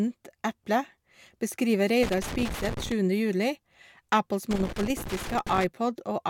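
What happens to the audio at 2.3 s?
Loose connector crackle runs from 2.03 to 2.92 s, so 2.3 s falls in the middle of it, just after "eple beskriver". A worn or dirty contact somewhere in the signal chain is intermittently making and breaking as it shifts, chopping the speech on and off in rapid, uneven fragments. Any DC on the line adds pops at each break. For just under a second, the result is an irregular burst of scratchy crackle over the speech.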